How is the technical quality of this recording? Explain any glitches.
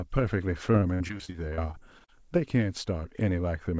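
The speech has one clear glitch. Repeated packet loss (robotic sound), 0.72 to 2.20 s: about fifteen short dropouts, up to 62 ms, are patched by stretching the previous sound, giving choppy speech with pieces missing over roughly a fifth of that stretch. The audio carries nothing above 8 kHz, which fits a G.722 wideband call codec.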